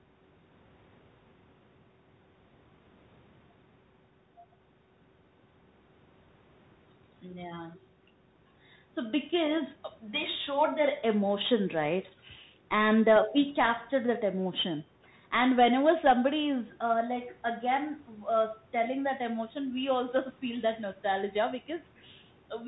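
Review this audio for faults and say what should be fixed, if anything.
The speech runs through a Bluetooth CVSD headset codec the whole way, and the damage is plainly audible. CVSD sends one bit per sample, just up or down, with a step size that adapts, which fits a 64 kbps headset link. Nothing above 4 kHz gets through, so the speech sounds boxy. Loud high-frequency sounds outrun the step, so s sounds come out scratchy and a granular hiss sits under everything. To avoid this, record on the device's own microphone or a wideband headset link instead of the CVSD narrowband mode.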